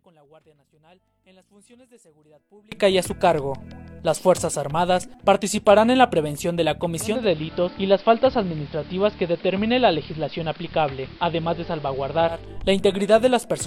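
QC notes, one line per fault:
0.00–2.72 s, one channel inverted: the sound drops by about 31 dB and its centred content all but disappears, leaving a faint residue. This is likely one stereo channel with reversed polarity, so the shared content cancels when the two channels are summed to mono.
7.00–12.53 s, digital radio blending to analogue: a 280 ms cross-fade into the AM broadcast brings up hiss roughly 25 dB below the signal, and the level falls by about 1 dB before the blend back.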